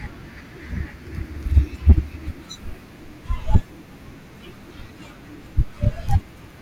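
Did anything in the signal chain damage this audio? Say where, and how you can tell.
Yes. Hard clipping damages the speech from 1.57 to 1.92 s, with the signal driven about 9 dB past what the stage could pass. The evidence is a harsh, buzzy fuzz on the loud syllables in that stretch. The waveform peaks there are sliced flat, and those squared tops add a spray of high harmonics. This points to an overloaded converter input or a fixed-point sample-format conversion.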